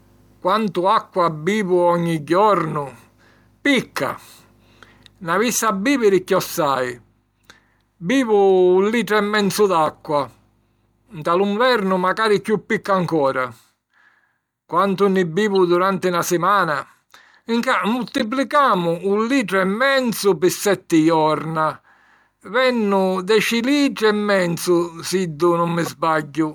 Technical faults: corrupt frame decoded

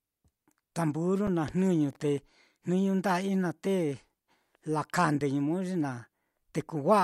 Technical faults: underrun with held sample

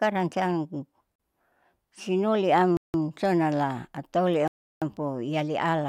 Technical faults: block of digital silence

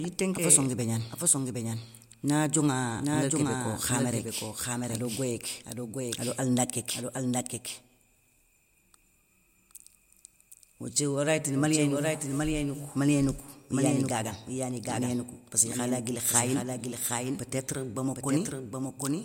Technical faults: doubled audio track

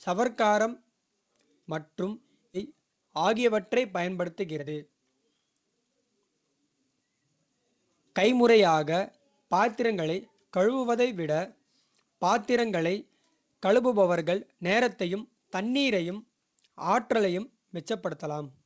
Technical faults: skip ahead; jitter buffer speed-up

